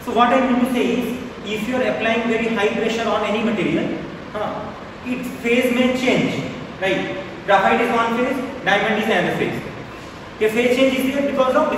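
Clock drift between sender and receiver runs through the whole clip: the sending side's audio clock is fast by about 4 percent, so audio arrives quicker than the receiver plays it out and the jitter buffer keeps filling. To stop it overflowing, the receiver has to discard material. The effect is not a steady pitch or speed change but a recurring unsteadiness, with small timing hiccups scattered unevenly across the audio rather than at a fixed rate.

Those repeated timing corrections run from 0.07 s to 11.50 s. Because the sender is ahead, every edit goes the same way: the receiver cuts out short slices to keep pace, which amounts to playing the material at about 104 percent of its proper rate overall. The cuts are small and irregularly spaced, so they come across as slight skips and a faintly uneven, hurried tempo, not as clear dropouts or clicks.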